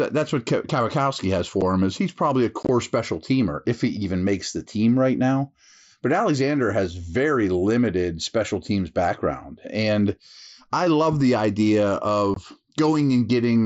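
Speech carried over a wideband mSBC headset link, with unconcealed Bluetooth headset packet loss at three points. A 7.5 ms hole at 1.61 s precedes "him is he's probably". Between 2.63 and 2.69 s, after "is he's probably a", about 45 ms drops out in pieces spread over 60 ms, the longest 22.5 ms, giving a choppy crackle before "special teamer if he". After "I love the idea", 12.34 to 12.37 s loses 22.5 ms. These lengths fit whole 7.5 ms frames vanishing with nothing filled in. On a waveform each loss is a flat stretch with abrupt edges. On a spectrogram it is a clean vertical gap through the whole band, which stops at 8 kHz under the codec's light grain.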